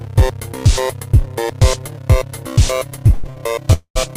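A recording of everyday sound with two short stalls from late packets close together: at 3.14 to 3.26 s the last sound is held for 95 ms, and at 3.30 to 3.37 s for 53 ms. Each time the jitter buffer ran empty and the receiver stretched what it had until the packet arrived. Nothing is lost, but the audio falls behind by that amount. A call audio freeze follows at 3.73 to 3.97 s. The sound is carried on for 222 ms as a fading fill, with about 80 ms of it silent, before playback resumes from the same point. The likely cause is packets delayed in transit.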